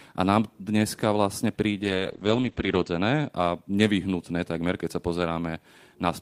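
At 1.84 s, right after "a nám dneska vlastne", a call bitrate drop sets in. The encoder falls from 32 to 12 kbps and its coded bandwidth narrows from 20 kHz to 8 kHz, staying at the lowest rate for 1.04 s. The speech turns muffled, rough and watery until 3.35 s, just before "nevyhnutné takmer keď sa". A spectrogram shows everything above 8 kHz sheared off under a flat ceiling, while the waveform envelope barely changes.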